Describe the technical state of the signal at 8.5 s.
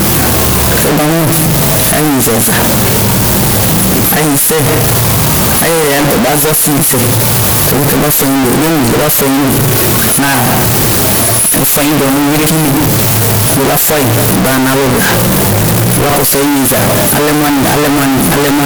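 At 8.5 s, as throughout the speech, the signal is near-square at an almost fixed, high level, very loud and harsh, with background noise as loud as the talker. This is likely a float read as integer, 32-bit float samples taken as 32-bit integers. Unlike ordinary clipping, quiet passages are equally blasted, yet pitch survives.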